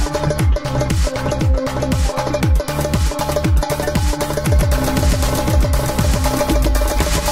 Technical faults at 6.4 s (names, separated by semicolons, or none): doubled audio track